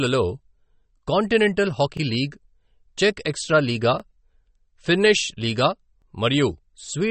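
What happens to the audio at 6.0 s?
Right after "ఫిన్నిష్ లీగా", from 6.02 to 6.04 s, there is an overlapping-chunks fault. The audio appears to have been handled in 2-second chunks, and the next chunk began before the previous one had finished. So about 23 ms of sound plays twice at the join. It is heard as a brief stutter or click at the join.

The same moment also carries the damage that runs through the whole clip. Nothing is present above about 8.4 kHz, so the top end sounds dull and cut off. The sound also has a watery, swirling texture, and the codec damage is plainly audible. This points to likely MP3 compression at a low bitrate, which fits roughly 32 kbps. At that rate the encoder removes the treble and drops weak frequency detail that flickers in and out between frames.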